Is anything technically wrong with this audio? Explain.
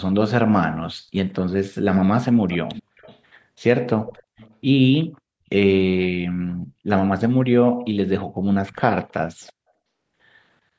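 Yes, there is echo leak, likely from a loudspeaker on the far end whose echo canceller let its own microphone pickup return. Delayed, faint copies of the speech trail by about 364 ms at 2.5–3.19 s and 4.07–4.55 s, and by about 321 ms, much quieter, at 9.08–9.13 s and 9.43–9.53 s.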